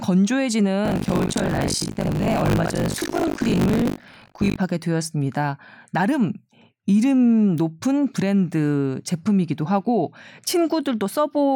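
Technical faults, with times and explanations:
0.84–4.56 s: buffer tearing. The speech carries a steady robotic rattle at 50 Hz, which fits a buffer period of about 20 ms. The program writing the ring buffer and the hardware reading it have slipped out of step, so within each period roughly a third of the samples are stale audio from around 70 ms earlier, joined abruptly on both sides. Those repeating splices produce the buzz, which is present only while signal is.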